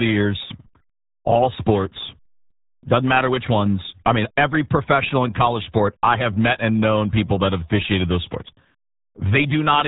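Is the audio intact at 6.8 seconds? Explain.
No, at 6.8 seconds you're hearing the RealAudio 14.4 codec, and it runs through the whole clip. The heavy squeeze, which fits an 8 kbit/s dial-up-era coder, leaves nothing above 3.8 kHz, so the speech sounds muffled and gargly there.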